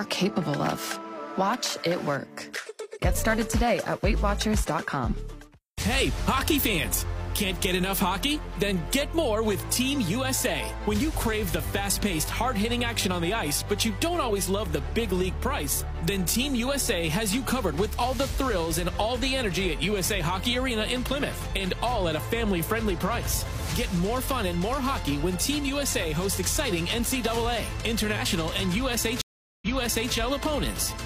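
At 29.21 s the sound cuts to about 0.4 s of silence, then picks up roughly half a second earlier, repeating a stretch, until about 30.14 s. This is a stream reconnect: the connection dropped, the player reconnected, and a fresh decoder restarted mid-stream from a resent burst.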